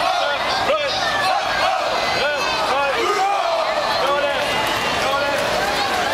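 No technical faults can be heard anywhere in the clip.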